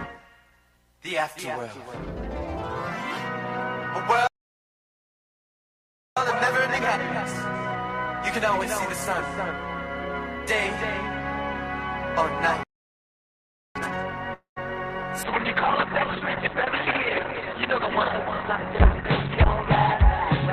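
At 4.27 s the audio cuts out for about 1.9 s, a playback stall likely caused by the player starving for data. From 6.17 to 9.17 s there's a time-compressed catch-up: the backlog is trimmed so the audio runs about 1.15 times fast at normal pitch. A second stall hits at 12.63 s and lasts about 1.1 s. A harder catch-up follows from 13.76 to 15.09 s at double speed. Inside that, at 14.33 s, a call audio freeze adds roughly a quarter-second: the last sound smears into a fading buzz and then silence, likely from delayed packets emptying the jitter buffer, and the audio picks up again with nothing lost. From 15.24 s to the end, a call bitrate drop makes everything rough and muffled as the top end closes from 20 kHz down to 4 kHz, which fits a fall from about 48 to 6 kbps.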